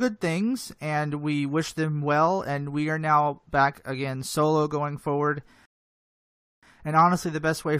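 At 5.65 s, right after "again solo going forward", the speech drops into silence until 6.63 s, then picks up exactly where it left off. This rebuffering stall happened when the player's downloaded audio ran dry. It waited for more data, adding about 0.97 s without losing anything.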